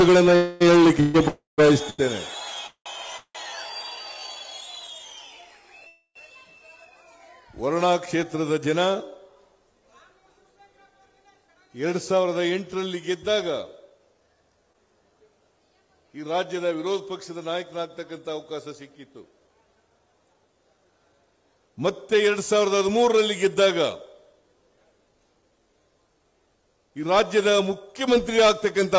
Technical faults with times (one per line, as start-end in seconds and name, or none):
0.36-0.62 call audio freeze
1.00-3.37 repeated stalls (stutter)
1.28-1.60 call audio freeze
4.01-4.33 jitter buffer slow-down
5.87-6.17 call audio freeze
11.40-28.94 jitter buffer speed-up
14.73-14.76 short concealed packet loss